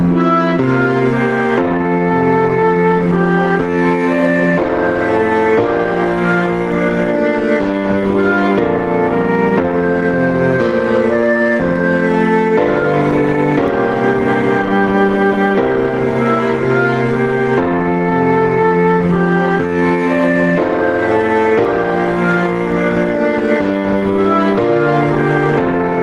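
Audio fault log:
throughout, gain pumping: the gain swings by around 10 dB, squashing dynamics, likely from a fast limiter fighting excessive microphone gain.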